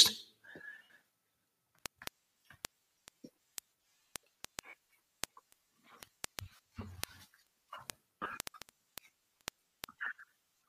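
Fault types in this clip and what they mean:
Word clock ticks: From 0.13 s to 10.63 s, a sharp, uneven tick repeats about every 70 ms, around 150 in all. The receiving device runs on its own clock rather than locking to the sender's. That mismatch is roughly 300 ppm. Each time the two clocks slip past each other, a few samples are misread and a single sample is dropped or repeated, producing a click at a steady rhythm across the whole clip.
Lost LE Audio frames: Gaps at 0.85 s (60 ms), 4.69 s (37.5 ms), 6.56 s (30 ms), 8.21 s and 10.20 s. The last two are scattered dropouts spread over about 120 ms each. Missing packets leave the LC3 decoder repeating the last spectrum with randomised signs, so the speech smears into a noisy wash that fades as a loss lengthens. The lengths fit 7.5 ms frames, likely from the link's LC3 coding.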